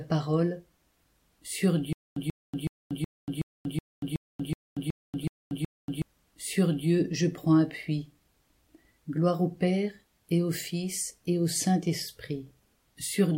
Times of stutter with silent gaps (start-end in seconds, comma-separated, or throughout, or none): 1.93-6.02